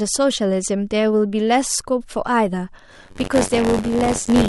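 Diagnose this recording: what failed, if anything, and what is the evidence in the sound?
A brief DAB burbling event occurs at 2.48 s. The fault sits in the broadcast reception and codec stage. A short burble sits over the speech. A small fraction of bit errors escaped error correction into the MP2 data.

From 2.90 s to the end, a robotic buzz at 93.8 Hz rides on the speech. This is buffer tearing at the driver or buffer stage. The program writing the ring buffer and the hardware reading it have slipped. About a tenth of each period replays audio some 40 ms old, with hard joins. The buzz rate fits a 256-sample buffer.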